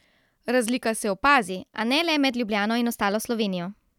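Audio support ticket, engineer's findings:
Wrong sample rate, 1.48 s to end: speech abruptly about 1.5 semitones higher and 1.09x faster. Pitch and tempo rise together, unlike a pitch-shift or time-stretch fault. Fits 44.1 kHz audio played at 48 kHz, resampler bypassed.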